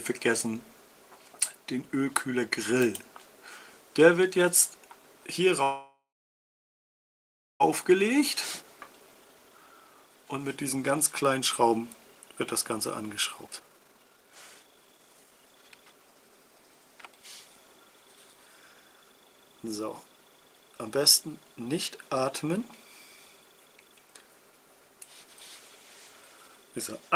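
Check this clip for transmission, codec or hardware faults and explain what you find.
The clip has two transmission faults, both from a call path. The audio stalls once, then runs fast while it catches up.

From 5.63 to 7.62 s there is a call audio freeze, about 2 s long. The sound holds briefly, then fades, and about 1.6 s of it is silent. The likely cause is packets held up in transit, which drained the jitter buffer. The receiver stretched the last sound until it died away. When packets returned, the audio resumed where it stopped. Nothing is lost. A gap is inserted and delay grows by about 2 s.

From 8.63 to 16.59 s there is a jitter buffer speed-up. The audio plays at 124% speed with unchanged pitch. It sounds hurried and crowded. The buffer held more audio than its target. To shed that excess, the receiver cut many short pieces, each one or a few pitch periods long. In total about two seconds were removed, roughly cancelling the stall's added delay.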